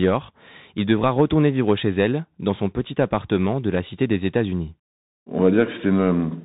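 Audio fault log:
Throughout: Bluetooth CVSD headset codec. The speech is squeezed into the narrowband headset path. Each sample is reduced to a single up-or-down step with an adaptive step size, at a rate that fits 64 kbps. The damage is plainly audible. Nothing survives above 4 kHz, so s sounds come out scratchy, and a granular hiss runs beneath the voice. On a spectrogram, energy stops flat at 4 kHz over a grainy noise floor. In the waveform, steep loud rises show as jagged, lagging slopes where the step can't keep up.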